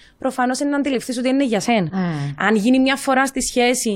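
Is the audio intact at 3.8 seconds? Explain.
Yes, the speech at 3.8 seconds plays through intact, with no audible dropout, click, distortion or other fault at that moment.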